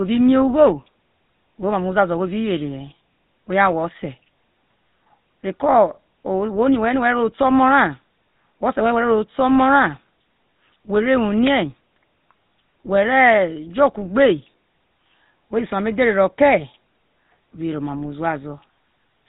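Speech with a buzzy, gravelly roughness and nothing above 4 kHz throughout, from the GSM full-rate codec, whose sparse pulse excitation fits its 13 kbps mode.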